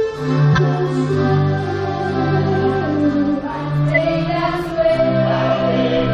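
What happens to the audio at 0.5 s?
At 0.52 to 0.59 s, compressed frames are skipped. Around 20 ms of audio goes missing, so the sound jumps ahead. Unlike a dropout there is no silent gap.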